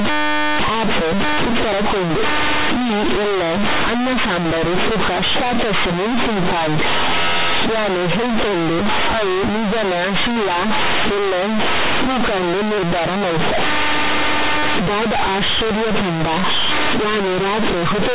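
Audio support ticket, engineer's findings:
Companded audio read as linear, whole clip. Very loud buzzy distortion, heavy noise in the pauses, quiet bits as big as loud ones. Mu-law bytes played as raw 8-bit samples without expansion, so each sign flip swings half the range. The 8 kHz mu-law G.711 telephone coding underneath looks fine, with the band topping out at 4 kHz. Probably just a missing decode step in the playback path.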